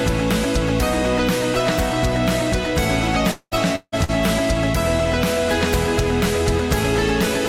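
At 3.31 to 3.54 s and 3.75 to 3.95 s, the sound smears into a fading buzz or hiss and then a brief gap, likely a long network dropout losing about 0.2 s and 0.16 s. On a spectrogram, each shows a smeared continuation thinning into a blank band.

At 4.04 to 4.11 s, a short concealed packet loss replaces about 40 ms with synthesized continuation, heard as a quick wobble. The waveform shows a slightly repetitive, blurred patch.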